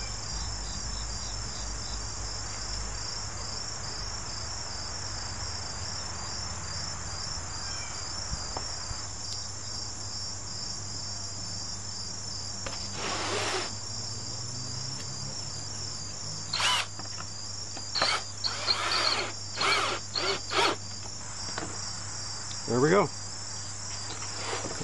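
Mains hum runs through the whole clip. A steady low tone sits under the sound at 50 Hz. Power-line current has leaked into the signal path, through a ground loop or a nearby transformer. The hum is fairly strong, roughly 15 dB below the signal.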